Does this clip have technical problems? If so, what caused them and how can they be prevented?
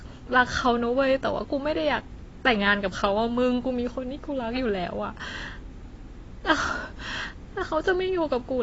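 Yes. AAC compression runs throughout: nothing above 7.6 kHz, with swirly smearing on sibilants that a plain low-pass filter wouldn't add, likely from AAC-LC near 24 kbps. Encode speech at a higher bitrate.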